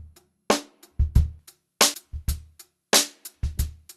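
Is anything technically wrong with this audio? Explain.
Yes, there are two faults.

From 1.39 s to the end, the audio turns thin, glassy and hissy, with sharp high-frequency edges. This is pre-emphasis left on: a treble boost applied for recording or transmission was never undone by the matching cut on playback. Around 10 kHz the top end sits about 11 dB above the 1 kHz level, a tilt consistent with a J.17-style emphasis curve.

At 1.94 s there is a short smeared blip rather than a hard click, and the sound jumps forward, losing roughly a fifth of a second. This is compressed frames skipped: a run of coded frames was missing or rejected as damaged, so the decoder moved straight past them. The gap fits several frames of about 26 ms each. Because adjacent frames overlap, the join comes out soft and blurred instead of sharp.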